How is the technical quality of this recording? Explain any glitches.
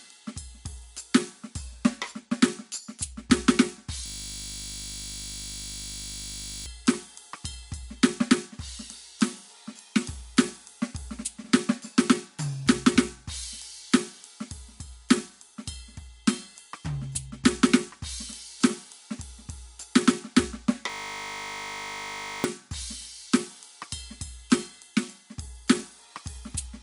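The music is interrupted twice by a system hang loop, from 4.06 to 6.66 s and from 20.9 to 22.44 s. Playback froze while the audio hardware kept replaying the same 20 ms slice of its buffer, repeating it at 50 Hz. This produces a steady buzz rather than music, and roughly three seconds and then about a second and a half of material never arrive. A waveform shows an identical short cycle tiled across each gap. A spectrogram shows flat horizontal bands at 50 Hz harmonics.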